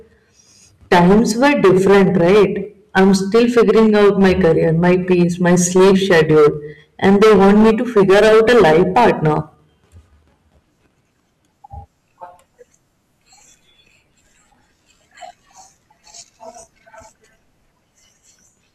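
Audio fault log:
0.92–2.45 s, 2.97–6.48 s and 7.04–9.38 s, hard clipping: the speech overdrives a stage by about 15, 12 and 16 dB, so peaks are sliced flat, spraying high harmonics as harsh crackling fuzz, edgier than soft saturation's rounded warmth.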